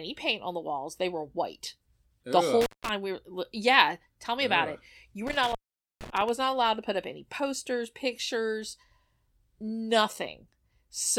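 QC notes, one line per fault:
2.61–2.89 s: intermittent contact. The speech drops out for about 182 ms as a loose connection in the signal path briefly opens. Crackle marks the break and remake of the contact, and faint hiss fills the gap while the line is open.
5.27–6.29 s: intermittent contact. A longer open of about 462 ms on the same pattern, with crackle at both edges and hiss during the gap. The signal returns just before "not allowed to put".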